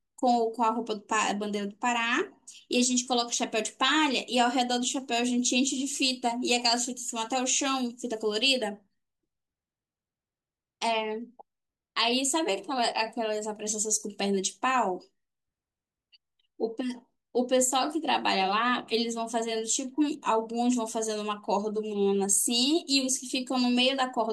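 No technical faults can be heard in the speech at any point in the clip.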